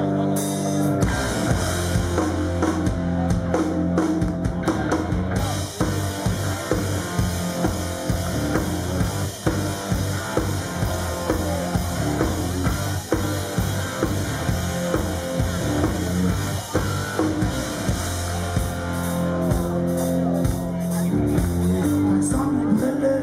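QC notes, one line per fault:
Nothing stood out on listening.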